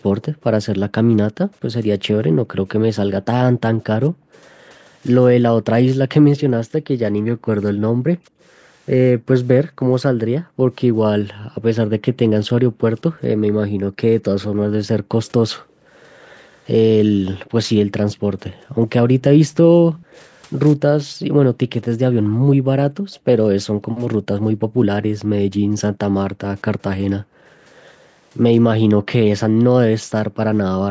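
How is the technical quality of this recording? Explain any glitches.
The recording has two recurring call-path faults in this speech clip.

Background gated by the echo canceller: from 0.29 to 15.86 s and 18.22 to 30.43 s, the room sound repeatedly dips. It drops by up to about 40 dB, around seven seconds in total, then around four. The canceller clamps the microphone while the far end plays.

Echo leak: a faint delayed copy of the speech returns at 2.68–6.41, 8.4, 12.98–13.21, 15.25–16.56, 18.15–20.17 and 23.12–23.19 s. The delay is about 215 to 221 ms. The copy sits well below the speech. It is likely loudspeaker sound the echo canceller failed to remove.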